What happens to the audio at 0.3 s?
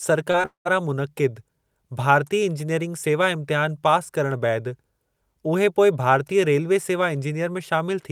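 At 0.31 to 0.36 s there is a short concealed packet loss: about 20 ms of the speech arrived too late, and the receiver bridged the hole by extending the preceding sound before blending back. It comes across as a brief smear rather than a silent gap or click, which separates it from a plain dropout.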